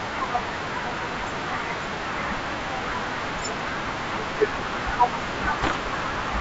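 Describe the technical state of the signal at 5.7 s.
At 5.7 s the signal carries bit errors on an ADPCM link, running from 5.63 to 5.77 s inside an otherwise clean-sounding 64 kbit/s G.722 wideband stream. Flipped bits, somewhat under one percent of them, knock the decoder's step size and predictor off track, so each error smears into a few milliseconds of pops, rough grit and brief level jumps. Unlike packet loss, the sound never drops to silence or a smoothed concealment gap; it keeps going, just corrupted.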